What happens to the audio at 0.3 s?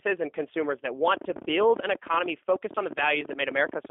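G.729 codec coding is present at 0.3 s, as it is across the whole clip. The speech is rebuilt from a modelled vocal tract filter, a pitch predictor and a few pulses per short frame, a low-rate scheme whose sound fits roughly 8 kbit/s. Only about 300 Hz to 3.5 kHz survives, so the speech sounds narrow and telephone-like, and the codec damage is plainly audible as a rough, synthetic edge.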